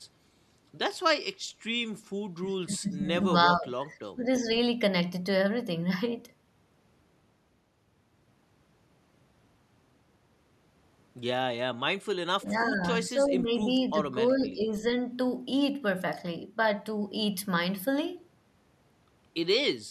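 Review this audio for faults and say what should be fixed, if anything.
Speech dips at 2.65–3.32, 3.54–3.97, 4.14–4.48, 12.4–12.83 and 12.99–14.87 s, by up to about 20 dB. That's likely speech suppressed in double talk, with the echo canceller ducking the talker while the far end spoke. Better double-talk detection in the canceller would prevent it.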